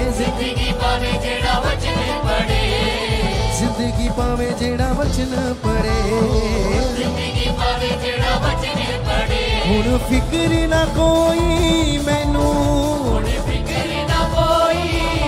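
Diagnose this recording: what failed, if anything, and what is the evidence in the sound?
Nothing in the signal points to a failure at any stage of the chain, with no gaps, clicks, level jumps, distortion or timing irregularities to be heard anywhere in the recording.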